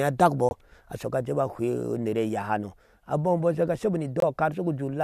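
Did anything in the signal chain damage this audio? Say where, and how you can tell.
Yes. Corrupt frame muted at the codec decoder: damaged compressed frames were rejected and replaced with silence, cutting abrupt, frame-length holes at 0.49–0.53 s and 4.20–4.24 s.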